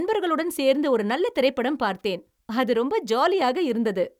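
A speech recording with no technical faults to report.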